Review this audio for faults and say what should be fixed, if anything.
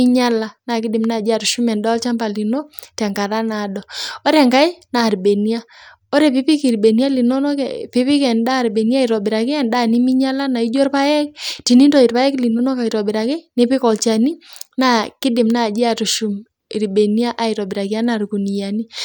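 No faults turn up in this audio, so nothing needs to be fixed.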